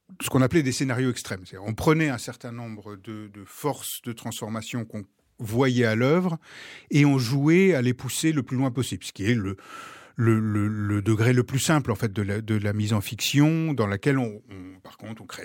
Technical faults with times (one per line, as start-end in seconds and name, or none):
2.23-2.25 chunks out of order
8.19-8.21 chunks out of order